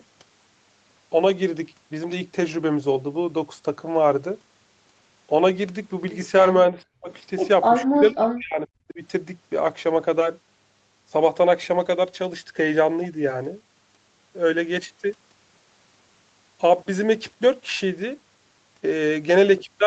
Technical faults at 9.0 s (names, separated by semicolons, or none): speech suppressed in double talk